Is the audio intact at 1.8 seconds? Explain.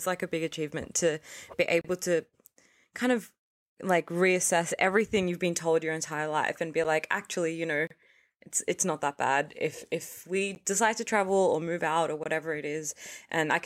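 No. Right after "big achievement to be", the speech drops out from 1.81 to 1.85 s, a 32 ms hole. This is a block of digital silence: samples were replaced by zeros, cutting in and out with no fade.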